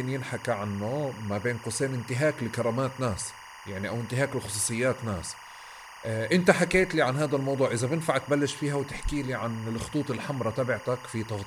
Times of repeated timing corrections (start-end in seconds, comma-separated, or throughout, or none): none